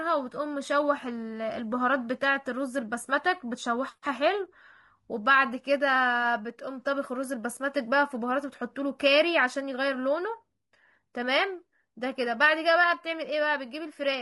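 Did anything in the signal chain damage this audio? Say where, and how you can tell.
Yes, and it's at the codec stage: there's plainly audible low-delay AAC compression across the whole speech clip. The voice sounds rough and grainy, with noise filling the gaps between harmonics and a top band that's thinned out. That's likely AAC-ELD, the short-frame mode used on video calls. Its short frames can't resolve pitch harmonics cleanly, and the damage fits a starved bitrate around 32 kbps.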